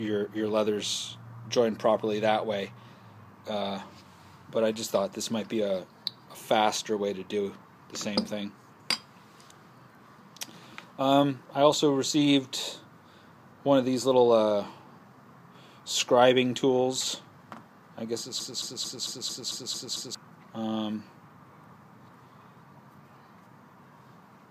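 From 18.40 to 20.15 s, a 0.22 s fragment of the audio repeats exactly, back to back, eight times in a broken-record loop, and the material that belonged there is missing. This most likely comes from the player, encoder or stream stalling and re-sending its last buffered fragment.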